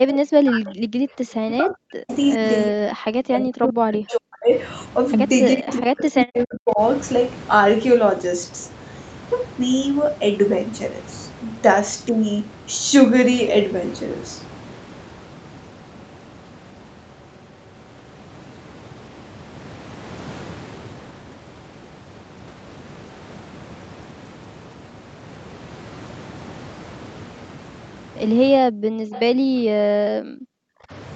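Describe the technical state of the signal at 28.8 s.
At 28.8 s the speech drops out in what sounds like speech suppressed in double talk, running from 28.71 to 28.87 s. The level falls by roughly 40 dB for around a tenth of a second. The likely cause is an echo canceller that misread overlapping talk as loudspeaker echo and turned the near talker down with it. On a waveform the envelope collapses to a thin sliver. On a spectrogram a near-empty vertical gap cuts through the speech bands below the 8 kHz ceiling.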